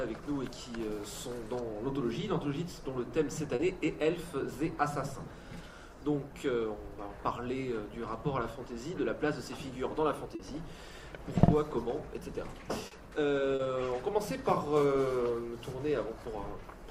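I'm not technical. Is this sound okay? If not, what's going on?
No. There's short concealed packet loss at 3.55, 10.35, 12.87 and 13.55 seconds. Each time, about 40 ms went missing, and the receiver filled the gap with guessed sound. That makes a brief smear or wobble.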